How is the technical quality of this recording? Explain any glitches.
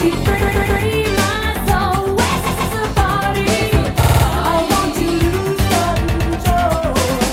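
The recording is marred by repeated frames at 0.41, 2.45, 4.02 and 6.07 s. A block of compressed audio replays: 139 ms three and two extra times, 45 ms four times, 109 ms twice, adding about 0.2 to 0.4 s each. It sounds like a stutter, seen as identical repeating waveform segments and spectrogram columns.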